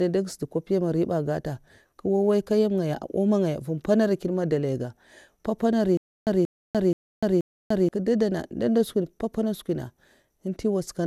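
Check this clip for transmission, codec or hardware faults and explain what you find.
Two faults show up in this speech clip. Generation loss runs throughout: it sounds swirly and hollow, with smeared attacks and nothing above 16.6 kHz, which fits roughly seven rounds of MP2 coding at around 128 kbit/s. From 5.97 to 7.89 s there's a stutter with silent gaps: a 0.18 s fragment repeats four times, every 0.48 s, with 0.30 s of dead silence between. That's likely a stalled stream replaying its last buffer.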